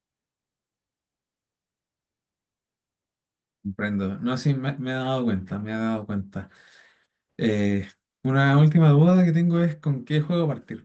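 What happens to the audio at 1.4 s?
Nothing goes wrong at 1.4 s; the speech there comes through intact, carrying only the steady band-limited character of the call codec it passed through.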